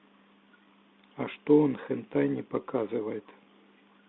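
Throughout, the speech shows a Bluetooth CVSD headset codec fault. The line passes only about 200 Hz to 3.6 kHz. The one-bit delta coding, which fits a 64 kbps CVSD stream, adds granular hiss, scratchy s sounds and distortion on loud high peaks.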